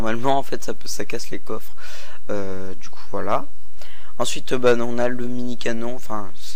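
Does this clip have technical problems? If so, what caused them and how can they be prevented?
Yes. Hard clipping occurs at 3.31 to 3.36 s and again from 4.22 to 5.05 s. The signal exceeds what one stage can pass by about 3 dB, then about 4 dB. Flattened peaks add high harmonics, heard as harsh crackle. Prevent it by lowering gain before the overloaded stage to leave headroom.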